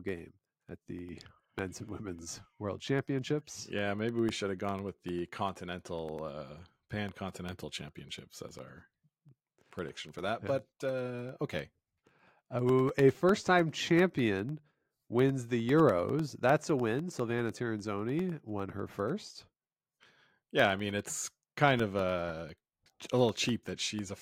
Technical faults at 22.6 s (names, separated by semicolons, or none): periodic USB or driver dropouts